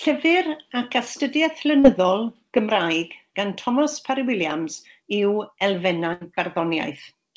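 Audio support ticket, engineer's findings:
Short concealed packet loss, 1.80 to 1.86 s. Brief smear in the speech. Jitter buffer or packet loss concealment. About 40 ms never arrived. Receiver extended the preceding sound, then crossfaded back into the real signal.

Burst of packet loss, 6.13 to 6.23 s. Held buzz or fading hiss, then a jump forward. Network path, with concealment at the receiver. About 80 ms lost in a row. Last sound continued and attenuated. Speech resumes with that stretch gone. Band stops at 8 kHz, which fits a wideband call codec such as G.722.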